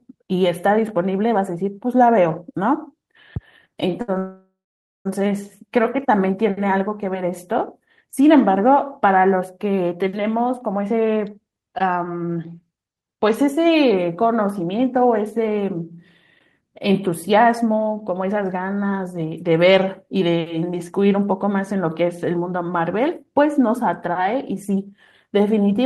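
At 4.01 s a short stall from a late packet holds the sound for 67 ms, to 4.10 s. One packet missed its slot, so the receiver stretched the last sound until it arrived and carried on. Unlike a freeze, it is a brief smear with no silence.

From 4.18 to 5.07 s comes a call audio freeze, likely from packets held up in transit that left the jitter buffer empty. The last sound turns into a fading buzz, then about half a second of silence. Nothing is skipped, but 871 ms of delay is added, far longer than the stall.

Jitter buffer speed-up follows at 10.38 to 15.99 s (109%), 16.61 to 19.48 s (108%), 20.73 to 22.36 s (107%) and 23.89 to 24.84 s (105%). The receiver cut tiny pitch-period slices to drain the added delay: about half a second first, then progressively less. Speech sounds hurried but keeps its pitch, unlike a plain resampling speed change.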